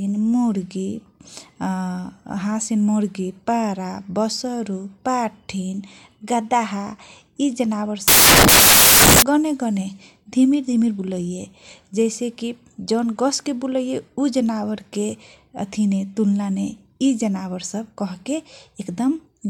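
Right after "इ जनावर", at about 8.08 s, the speech turns into a blast of loud, harsh broadband noise until 9.22 s, just before "गने गने". That's samples built from the wrong bytes: the byte order or alignment slipped, so the jittery low bits became the big part of each value.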